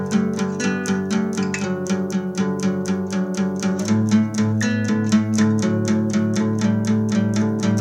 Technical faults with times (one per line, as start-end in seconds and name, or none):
none